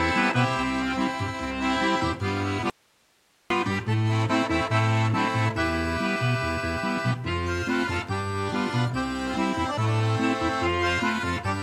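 At 2.70 s the signal drops out abruptly and returns at 3.50 s, an audio dropout to a faint residue lasting about 0.8 s. Only hiss remains in the gap, roughly 40 dB below the signal, likely a momentary break in the source while the downstream path stayed live.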